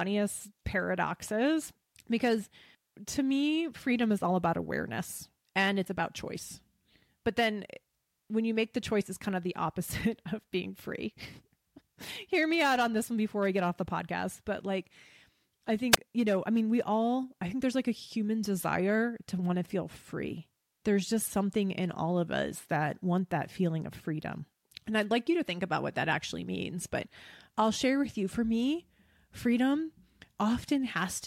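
At 15.91 to 15.97 s, just before "you know I mean", a wireless microphone squelch dropout occurs: the analogue radio link fades, hiss swells briefly, then the receiver's squelch mutes the speech for about 17 ms. That rising static before the gap separates it from a clean digital dropout.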